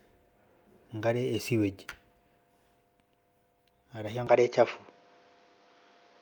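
At 4.27 s the speech abruptly turns duller and narrower, with nothing above 6.8 kHz, a level shift of about 5 dB and a faint new noise floor, with no gap at the join. That's likely the input switched to a poorer device through to the end.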